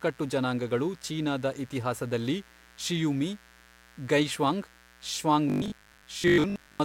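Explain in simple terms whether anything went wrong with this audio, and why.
A couple of things went wrong here. First, there's mains buzz running under the whole recording: a steady, raspy hum locked to the 60 Hz power supply. It usually comes from something like a light dimmer, a power rectifier or a poorly shielded cable picking up electrical spikes, twice per mains cycle, which spread into a gritty buzz well above 60 Hz. It sits quietly behind the speech, but it never lets up.

Second, from about 5.50 s to 6.84 s the speech turns into robotic sound from repeated short buffers. The voice goes stiff and metallic, with a fixed buzz at about 50 Hz while the words still come through roughly. The likely cause is new audio arriving too slowly, so the software kept replaying the last chunk of sound, around 20 ms long, in place of what was missing. About half of that stretch seems to be repeats, and replaying a 20 ms chunk over and over is exactly what forces that 50 Hz drone.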